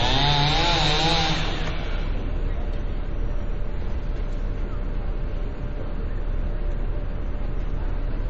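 Throughout the clip, the audio stops abruptly at about 8.1 kHz and carries plainly audible watery, swirling artefacts with smeared attacks. This is likely MP3 compression at a very low bitrate, consistent with roughly 32 kbps, where the encoder cuts the treble and drops weak frequency components from frame to frame.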